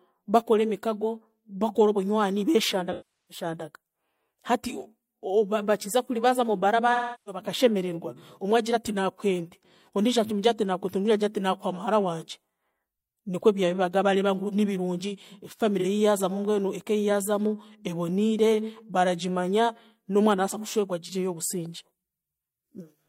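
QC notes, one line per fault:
2.91–3.44 s, 6.92–7.42 s, 15.80–15.86 s: AAC frame loss with concealment. About 384 ms, 341 ms and 43 ms of coded speech went missing. The decoder rebuilt each gap from the last good spectrum, so the sound smears into a phasey, noisy patch. On a spectrogram it shows as blurred, flattened bands, and the waveform loses its sharp envelope detail.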